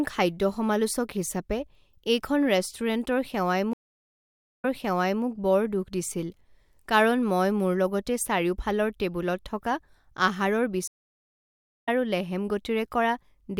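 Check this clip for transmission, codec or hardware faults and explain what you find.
Two stream reconnects interrupt the speech. Each time, the connection dropped, the player went silent, then reconnected and started a new decoder partway through the stream.

From 3.73 to 5.24 s, output stops for about 0.85 s. When it returns, it has jumped back 0.65 s, so a short stretch of speech is heard twice. This fits the server resending a burst of recent audio on reconnection.

From 10.88 to 11.89 s, there is a 0.97 s gap. Playback resumes roughly 0.7 s further on, at "আৰু লেহেম", so that portion of the speech is lost entirely.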